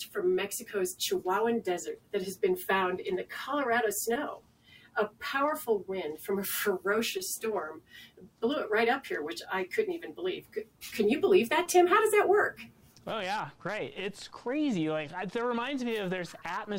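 Brief smears or wobbles interrupt the sound at 4.13 to 4.17 s, 7.17 to 7.21 s and 11.63 to 11.67 s. Each is a short concealed packet loss. About 20 ms of audio failed to arrive at the decoder in time, and the receiver bridged the hole by extending what came just before it, either by continuing its pitch or as shaped noise. It then blended back into the real signal.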